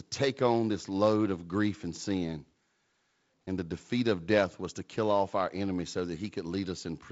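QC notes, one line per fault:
No faults heard in this speech recording.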